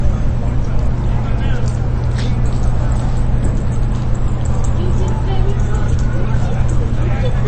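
From start to finish the treble is gone: nothing reaches above 8.3 kHz, and there's a clearly audible watery, swirling texture where quieter detail flickers in and out. That points to MP3 compression as the likely cause, with the encoder starved of bits, which fits a rate somewhere around 33 kbps. At that budget it chops the top end at a fixed frequency and drops weak components frame by frame, so the sounds come across dull and a bit unstable.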